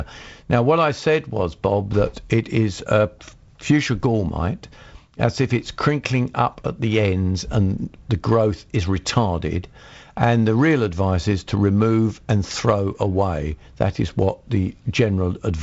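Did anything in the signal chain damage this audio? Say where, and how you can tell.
No, nothing in the signal chain damaged this audio.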